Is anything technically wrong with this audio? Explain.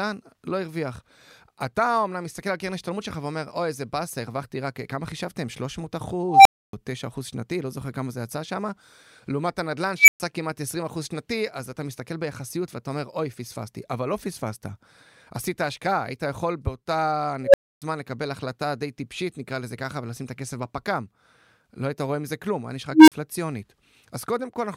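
Yes. An unstable filter breaks into the speech four times: 6.28–6.73 s, 9.98–10.20 s, 17.44–17.82 s and 22.92–23.12 s. Bad coefficients let a recursive filter's output feed on itself, so a tone of roughly 700 Hz, 2 kHz, 500 Hz and 300 Hz swells over 0.1 to 0.17 s, clips, then drops to silence for 0.28, 0.12, 0.28 and 0.04 s while the filter resets. Acoustic feedback builds more slowly and never ends in that abrupt silence.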